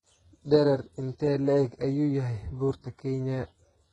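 It's a short speech recording with heavy codec damage all the way through, and it sounds like HE-AAC compression. The top end is synthetic: above the crossover the treble is likely rebuilt by copying lower bands upward, so the s sounds come out gritty and lispy. Nothing comes through above 11.1 kHz, and the damage fits a very low bitrate of around 12 kbps.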